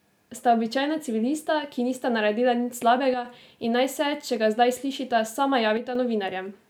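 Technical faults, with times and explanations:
3.14–3.25 s and 5.77–5.95 s, one channel drops out: the speech abruptly dips about 6 dB, likely because one stereo channel briefly vanished before the mono sum.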